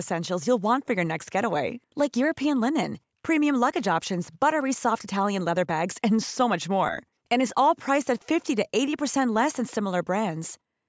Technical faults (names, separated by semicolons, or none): none